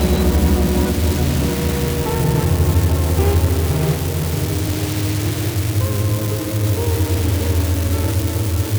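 An unreliable data bit flips at random, adding identical spikes of about -13 dBFS throughout, heard as a steady crackle or fizz that continues through pauses.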